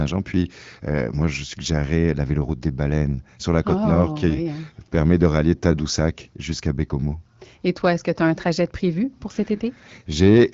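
No technical faults are audible.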